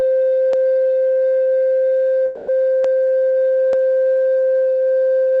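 Dropped samples at 0.53 s: a single sharp click in the music, likely from a fraction of a millisecond missing, so the waveform jumps abruptly. A call audio freeze follows from 2.25 to 2.50 s. The last sound is stretched into a fading buzz for about 230 ms, likely because delayed packets emptied the jitter buffer. The music then resumes where it stopped, shifted later, with nothing lost. Dropped samples recur at 2.84 and 3.73 s as the same isolated clicks. Through the call path the music is cut off above 8 kHz, with coding character pointing to Opus at around 24 kbps.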